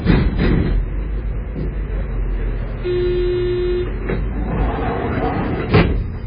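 A recording of everyday sounds, heavily damaged for its whole length by what is likely MP3 compression. Nothing survives above 5 kHz, and the remaining band sounds watery and swirly, with quieter detail flickering in and out and attacks smeared. The damage points to a very low bitrate, around 16 kbps. A plain low-pass filter would remove the top just as cleanly, but it would not add this shifting, bubbling texture inside the remaining band.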